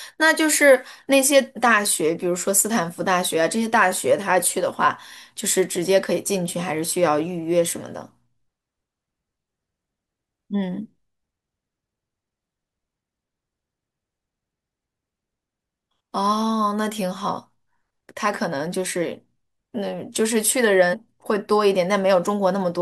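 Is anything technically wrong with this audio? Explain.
Yes. Damaged data in a compressed stream hits the speech at 1.56 s and 20.92–20.95 s. Corrupted bytes make the decoder misread frames and lose sync, causing brief glitches such as a chirp, squawk, click or short hole.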